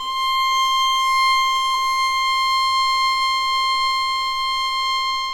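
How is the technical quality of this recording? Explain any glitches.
One glitch stands out. At 1.74 s there is a case of compressed frames skipped. About 20 ms of sound never plays, which fits a single lost or rejected frame. The audio jumps ahead.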